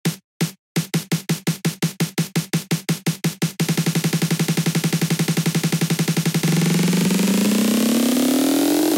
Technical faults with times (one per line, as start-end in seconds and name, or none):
0.00-8.97 block size mismatch (padded)